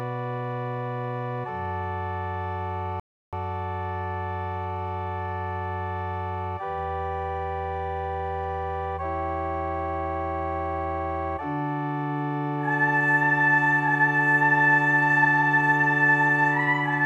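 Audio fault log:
3.00 to 3.33 s, rebuffering stall: playback drained its store of downloaded audio faster than new data arrived, so the player halted and waited for the buffer to refill. The result is a sudden drop to silence lasting about 330 ms, after which the sound picks up exactly where it broke off, with nothing skipped or repeated. The gap stretches the timeline by that third of a second rather than removing any material.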